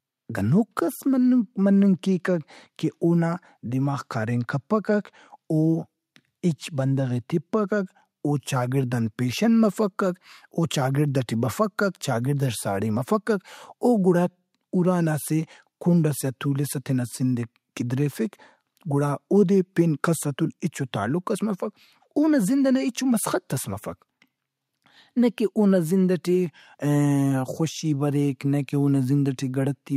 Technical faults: none

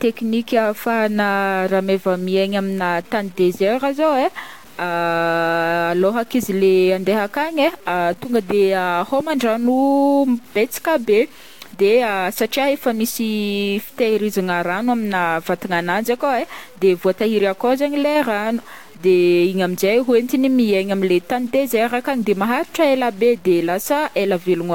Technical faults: low bit depth without dither

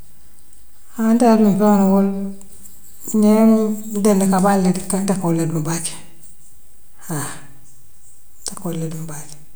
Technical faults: DC offset

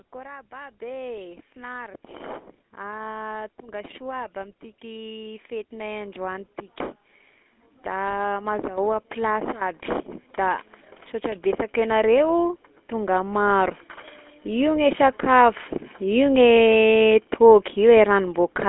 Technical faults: GSM full-rate codec; automatic gain rising

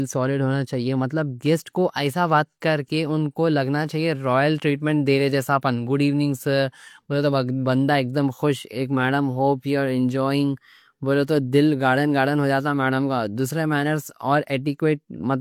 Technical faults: low-bitrate audio saved at a high bitrate

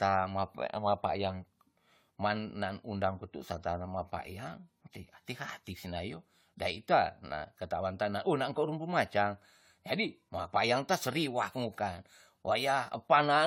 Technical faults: generation loss

